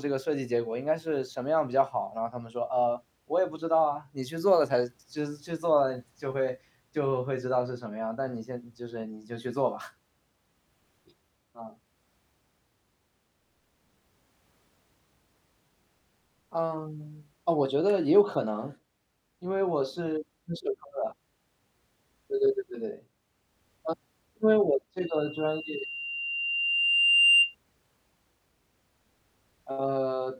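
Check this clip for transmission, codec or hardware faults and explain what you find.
One fault is present. A loudspeaker feedback squeal runs from 25.0 to 27.5 s: the microphone is re-amplifying its own loudspeaker, and at 2.8 kHz the loop gain tops unity. That single tone swells over about two seconds into a piercing whistle roughly 10 dB above the speech.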